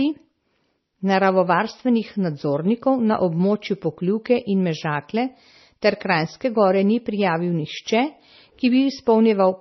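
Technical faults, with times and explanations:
Throughout: likely MP3 compression, heavily damaged. Nothing survives above 5.9 kHz, so s sounds lose their edge and the speech sounds watery and swirly. A spectrogram shows a flat ceiling at 5.9 kHz with flickering gaps below, which fits a bitrate near 24 kbps.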